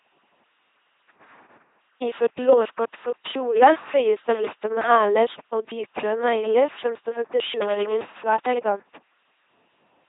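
The whole clip runs through an LPC-10 vocoder, and it's heavy going. The speech has that flat, buzzy robot quality because every instant is rebuilt as either a pulse-driven buzz or a burst of noise pushed through a small all-pole filter, so there's no in-between. You hear stray buzz and hiss where it guesses voicing wrong, and nothing above 3.8 kHz, all of which fits a 2.4 kbit/s vocoder.

Then there's loose connector crackle twice, first from 4.30 to 4.48 s, then a longer stretch from 7.61 to 8.20 s. It sounds like an irregular scratchy burst, the kind you get when a worn or dirty contact keeps making and breaking. The signal gets chopped up in rapid bursts, and any DC sitting on the line turns those breaks into little pops.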